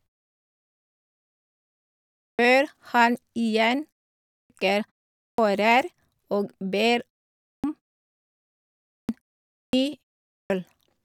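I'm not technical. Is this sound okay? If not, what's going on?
No. This has a clipped start after a pause: the playback device drops into a sleep state during silence and takes about 0.2 to 0.24 s to come back, so each restart begins abruptly with its opening sounds missing. It happens at 2.19, 4.26, 5.18, 7.40, 8.85, 9.51 and 10.27 s, even after pauses as short as 0.3 s.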